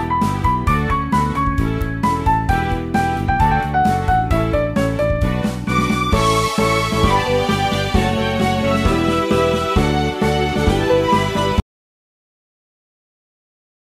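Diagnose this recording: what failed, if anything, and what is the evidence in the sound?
A single sharp snap at 1.82 s sits on top of the sound, an electrical switching spike, likely a nearby switch arcing into the analogue wiring.

From 11.6 s the sound cuts to total silence through to the end, an audio dropout to silence, likely a lost input link while the recorder kept writing silence.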